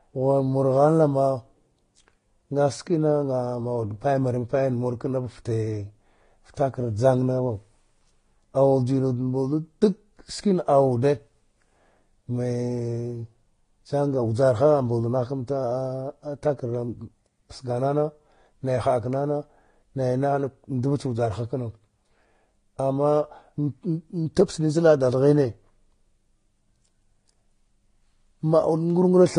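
Throughout, the speech has nothing above 10.1 kHz and stacked artefacts. This is likely transcoding between lossy codecs, consistent with AAC followed by Vorbis.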